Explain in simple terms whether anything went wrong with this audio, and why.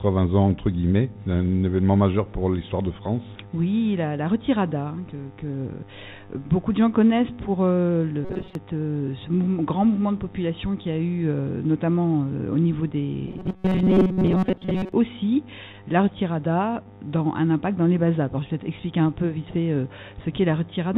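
Yes, two things went wrong. The first is robotic sound from repeated short buffers, from 8.25 to 8.55 s and again from 13.28 to 14.92 s. The sound turns into a stiff, metallic buzz at a steady 188 Hz. The likely cause is that new audio arrived too slowly. The software kept replaying a tiny slice, about 5 ms, which fits that buzz. Roughly 70 percent of the audio there is repeats, so the real sound is partly skipped.

The second is short concealed packet loss, from 16.83 to 16.87 s. About 20 ms of audio never arrived in time. The receiver patched the hole by stretching the sound that came just before, then blended back into the real audio. You hear it as a tiny smear or wobble. A very short sound there could be lost. Throughout the clip, the call path's phone-style codec leaves nothing above 4 kHz, giving the sound a narrow, telephone-like quality.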